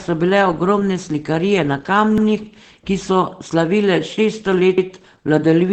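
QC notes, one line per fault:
Throughout: Opus voice compression. The speech passes through a low-rate voice coder, which fits SILK at about 12 kbps. It cuts everything above 8.7 kHz and models the excitation coarsely, so the speech is plainly muffled, hoarse and faintly robotic.
2.18–2.28 s and 4.78–4.88 s: overlapping chunks. The audio was handled in 2.5 s chunks, each starting before the previous one finished. At each join a 100 ms slice plays twice, heard as a brief stutter repeating at the same interval.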